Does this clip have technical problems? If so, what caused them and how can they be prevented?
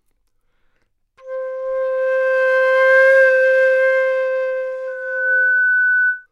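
Yes: loudspeaker feedback squeal from 4.87 to 6.27 s, a 1.5 kHz tone building over about half a second to roughly the sound's level. The microphone-to-loudspeaker loop exceeded unity gain there. Lower gain, reposition the microphone, or notch 1.5 kHz.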